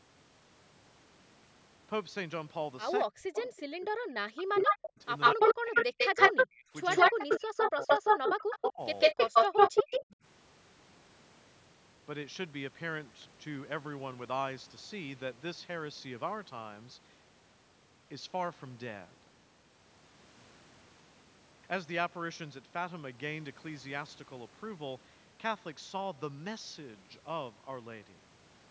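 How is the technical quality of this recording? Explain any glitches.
The first ten seconds are rough, with two call problems tangled together.

Speech suppressed in double talk hits at 3.08–5.01, 5.34–6.73, 7.11–8.81 and 9.13–10.19 s. The speech dips by up to about 40 dB, likely because the echo canceller couldn't separate it from loudspeaker echo while both sides talked.

Echo leak appears at 3.35–3.6, 4.37–4.84, 5.2–6.46 and 6.9–10.05 s. It's a delayed copy of the speech, about 250 ms late at first and 147 ms after that, likely echo the canceller failed to remove. It starts faint, about 15 dB under the speech, then rises to about 10 dB above it.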